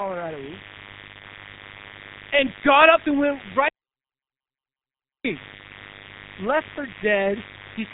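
Mains buzz runs from start to finish, a steady, raspy hum built on 50 Hz and its harmonics reaching into the kilohertz range. Sharp switching spikes from a dimmer, rectifier or unshielded line leak in twice per mains cycle, sitting roughly 20 dB beneath the speech.

G.723.1 codec damage is also present throughout, and it is heavy. Nothing survives above 3.8 kHz, so the speech is muffled and hoarse, with smeared consonants from the coarse 30 ms frames and the sluggish voice model, which fits a low rate of around 6.3 kbit/s.

An audio dropout to silence occurs from 3.68 s to 5.25 s. The speech cuts off mid-flow and returns after 1.56 s of silence with no room tone, so whatever was spoken in that stretch is lost. The likely cause is the input disconnecting or muting while recording continued.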